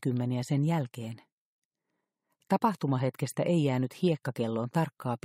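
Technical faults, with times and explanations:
No technical faults can be heard in this clip. There is nothing to time or explain.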